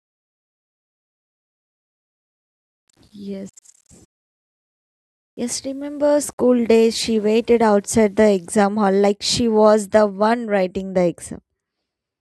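From the start to 8.55 s, quiet stretches of the speech sound grainy, with a gritty distortion that shifts with the signal. The likely cause is low bit depth without dither: rounding to what fits about 10 bits leaves error that follows the speech, roughly 50 dB down.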